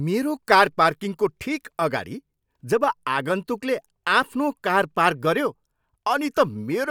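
At 4.22 s, a block of digital silence lasts 5.3 ms. That fits a 256-sample buffer left unfilled. The abrupt edges give a tick.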